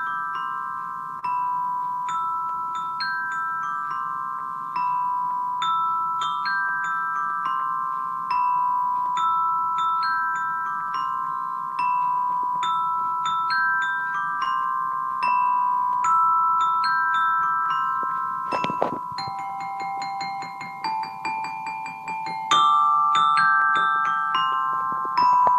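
The audio carries clock drift between sender and receiver throughout. The sender's clock runs roughly 2 percent slow. The receiver's buffer keeps running low, so small timing hiccups recur at uneven intervals across the whole clip. The first is a short stall from a late packet at 1.19 to 1.24 s. The buffer ran empty, and the last sound was held for 29 ms until the packet arrived. Nothing is lost, but that moment drags slightly with a faint buzz or dip. From 2.33 to 25.37 s, repeated timing corrections follow. The receiver keeps stretching short pieces, playing at about 99 percent speed and adding roughly 300 ms in total. Scattered short gaps appear at 2.57 to 7.63 s, 9.89 to 12.20 s, 14.00 to 14.95 s, 16.74 to 19.52 s and 23.60 to 25.45 s. Each stretch holds a handful of late packets patched by continuing the last sound. None runs longer than about 15 ms, so they register as brief ticks or smears.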